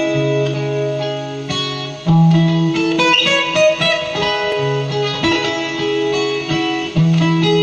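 Small clicks or skips are heard at about 0.54 s and 4.52 s. They come from overlap between stream segments about 4 s long: the player trims the overlapping span, though that sound was not really doubled, and the waveform jumps.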